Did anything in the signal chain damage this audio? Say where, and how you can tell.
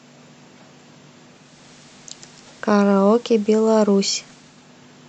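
Yes, at the receiver: digital radio blending to analogue. From 1.23 s to 4.77 s the speech cross-fades over about half a second to the FM feed, level dips about 1 dB, and hiss rises to roughly 30 dB below the signal, then it fades back to digital.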